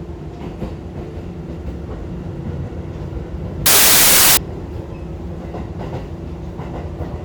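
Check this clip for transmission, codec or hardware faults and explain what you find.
One fault stands out, from 3.66 to 4.37 s: the audio is abruptly replaced by loud, harsh broadband noise, close to white on the louder sounds. This is samples built from the wrong bytes. For those 0.71 s the reader assembled each sample's bytes incorrectly, through an off-by-one offset, swapped byte order or wrong alignment. The rapidly fluctuating low-order bits therefore landed in the most significant position and swamped the real signal.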